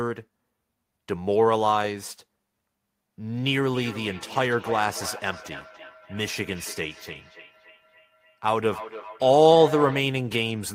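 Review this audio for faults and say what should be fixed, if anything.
From 3.7 to 10.06 s there's feedback echo between two devices: the speech comes back roughly every 300 ms, peaking about 14 dB below the voice. A second device in the same room is replaying the call, and this microphone picks it up again. The local echo canceller only removes its own device's playback, so it misses that sound. To prevent it, keep only one device joined to the call in that room, or mute the other device's speaker and microphone.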